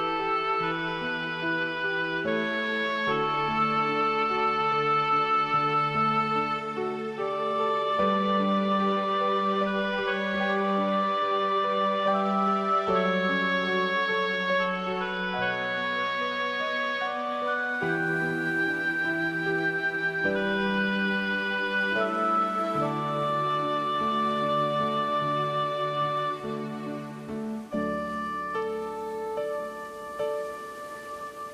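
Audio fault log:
No faults detected at any point in the audio.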